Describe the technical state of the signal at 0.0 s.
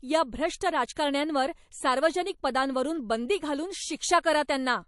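MP3 compression at 0.0 s, running through the whole clip: the treble stops at 11.3 kHz, and plainly audible watery artefacts come likely from weak frequency lines being dropped frame to frame, which fits a bitrate around 48 kbps.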